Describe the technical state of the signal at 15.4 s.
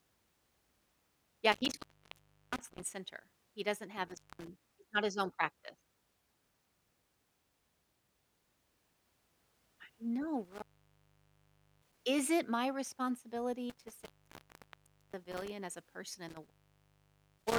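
At 15.4 s the signal sits inside an intermittent contact fault that runs from 13.70 s to 15.50 s. A loose cable or plug connection is opening and closing during that span. Across the span the line is open for about 1.08 s in total. While it is open, the speech drops out or breaks up and faint hiss remains. Crackle marks the edges where the contact makes and breaks.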